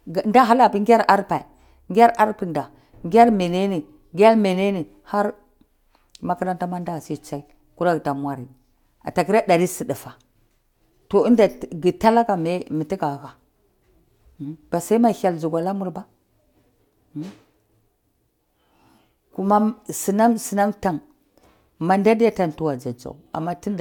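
Nothing in the speech here stands out as a technical fault; there's simply nothing to flag.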